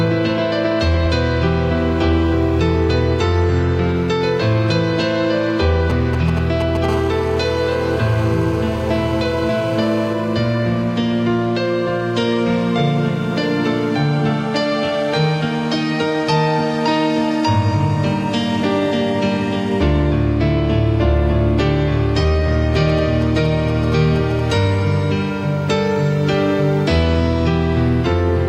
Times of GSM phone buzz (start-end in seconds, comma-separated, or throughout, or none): 6.89-10.13